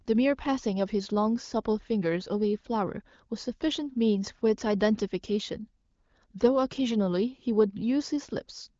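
No technical faults are audible.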